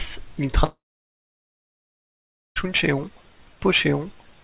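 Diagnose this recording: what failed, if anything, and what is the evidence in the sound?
At the network stage, a long network dropout likely stopped packets arriving from 0.64 s to 2.66 s. The receiver stretches the last sound into a brief fading buzz, then about 1.8 s of silence follows, and the speech resumes with nearly 2 s missing.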